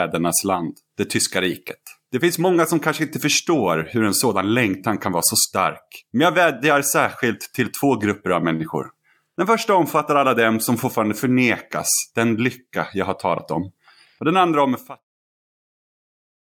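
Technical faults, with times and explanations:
Nothing stood out on listening to this speech clip; the smooth fade out near the end, which completes at 15.05 s, is an ordinary editorial touch.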